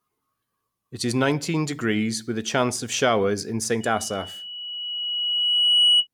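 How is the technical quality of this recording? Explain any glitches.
The recording is compromised by loudspeaker feedback squeal from 3.80 s to 6.07 s. A microphone picked up its own loudspeaker, and at 2.9 kHz the loop gain exceeded unity, so that tone grew by itself, swelling over about two seconds to roughly 10 dB above the speech.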